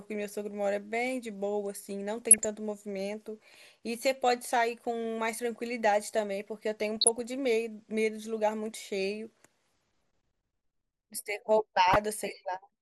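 Across the whole speech clip the sound is dull and plainly granular, with a gurgling edge and a top end that comes and goes. This is most likely MP2 compression at a rate around 80 kbps: too few bits leave upper sub-bands switched off or coarsely quantised. The damage is steady rather than bursty, which separates it from what follows.

DAB burbling breaks in at 2.22–2.45 s, 6.97–7.19 s and 11.87–11.96 s: short bouts of burbling noise blips over the speech. Here a small fraction of a percent of bit errors slipped past error correction into the MP2 data, and wrong samples put short blips of noise into single sub-bands. Unlike a dropout, the audio never goes silent. Instead it turns briefly to a burbling garble.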